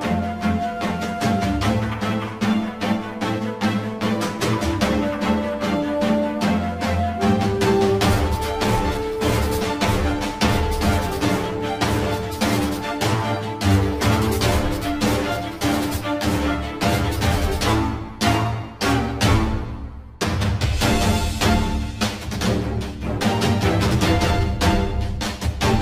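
Right from the start and all the way through, there's channel delay with comb filtering. One side is running late by around 10 ms, and when the two get folded to mono, anything common to both cancels at evenly spaced points, the first down near 50 Hz, then every hundred hertz or so above it. That fixed run of notches makes the whole thing sound hollow and a bit phasey, like it's coming through a tube.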